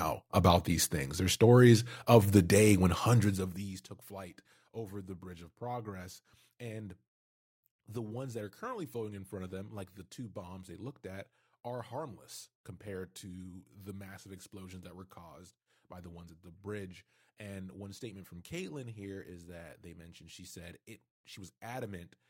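A rapid ticking, like a zip being drawn, rides on the speech from 3.07 to 3.88 s, starting just after "of the day when" and ending before "flight over the", while the level drops by around 20 dB. This is zipper noise: the gain is cut in coarse steps, around fifty a second, rather than being smoothed, so each jump leaves a small click.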